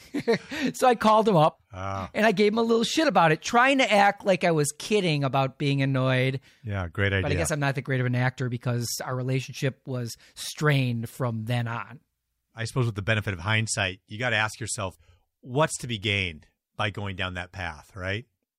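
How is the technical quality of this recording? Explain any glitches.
No technical faults can be heard in the recording; the speech signal stays continuous and intact throughout.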